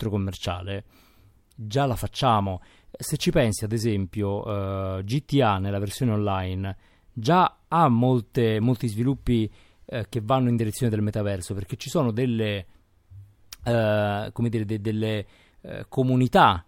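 Dropped samples at 8.63 s: a fraction of a millisecond of the speech is likely missing, so the waveform steps abruptly from one value to a later one. Nothing audible is removed, but the jump produces a single sharp click.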